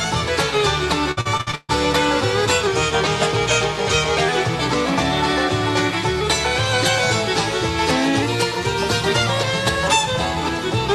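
From 1.11 to 1.71 s the sound turns choppy and robotic, broken by seven short holes, the longest 136 ms. This is repeated packet loss: each missing stretch is patched by extending the preceding sound, and over half the span is filled this way.

Between 2.67 and 4.29 s everything slows by 6.42% and sinks 115 cents, about a semitone. Later, from 8.22 to 9.43 s, the audio speeds up by 6.42% and rises 108 cents. Both shifts are likely drift correction steps, where clock-matching software abruptly changed the playback rate to rebalance its buffer.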